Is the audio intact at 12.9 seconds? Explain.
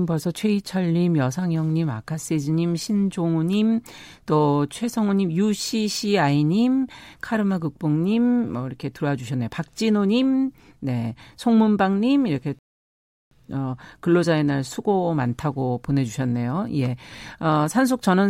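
No, 12.9 s falls inside a rebuffering stall running from 12.59 to 13.31 s. The player ran dry of downloaded data and paused, so the speech drops to silence for about 0.73 s, then picks up exactly where it stopped, with nothing skipped, just time added.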